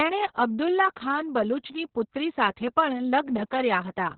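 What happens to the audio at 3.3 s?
At 3.3 s, as everywhere in this speech, Opus voice compression is audible. The SILK coder's coarse, narrowband coding, consistent with roughly 6 kbps, leaves the speech muffled, hoarse and slightly robotic. A spectrogram shows a hard ceiling, with nothing above 4.3 kHz.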